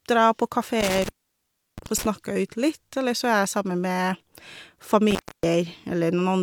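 Intermittent contact, a loose connection opening, cuts the speech at 0.80–2.06 s (open 0.69 s) and 5.11–5.43 s (0.28 s), with edge crackle and faint hiss, unlike a clean digital dropout.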